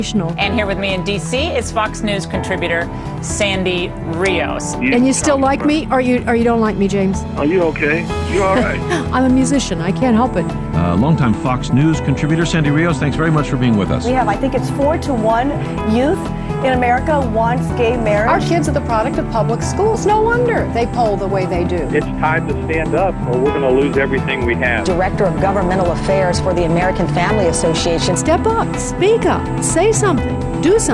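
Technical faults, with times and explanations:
No dropouts, clipping, noise bursts, timing glitches or other technical faults can be heard anywhere in the recording.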